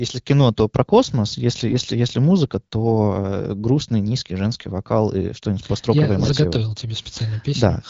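At 1.68 to 1.74 s, between "то про космос если" and "если музыка", AMR bit errors corrupt the weakly protected bits of roughly three frames, at an error rate around 5 percent. The excitation pulses land in the wrong places and the finer pitch, gain and spectral values drift, so the sound turns briefly hoarse and gargly while keeping its pitch and level. The same fault returns at 6.20 to 6.32 s, after "построковое я", spanning about four frames with the same scratchy roughness over the AMR wideband (HD Voice) path, which sounds consistent with around 12.65 kbit/s.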